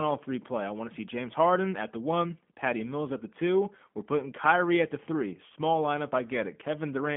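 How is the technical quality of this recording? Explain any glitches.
The quality is limited by the G.729 codec, which is audible for the whole clip. The sound is narrowband, confined to roughly 150 Hz to 3.4 kHz with nothing above 3.5 kHz, so it has that muffled phone-line feel. G.729 doesn't carry the actual waveform. It models the vocal tract, adds a pitch predictor and places a few pulses per short frame, which fits an 8 kbit/s VoIP stream. That's why the speech sounds slightly rough, buzzy and synthetic throughout.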